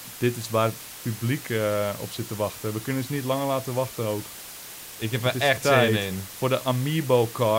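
Low bit depth with dither runs throughout the speech: dithered rounding to about 6 bits turns the error into a steady, even hiss roughly 15 dB below the voice.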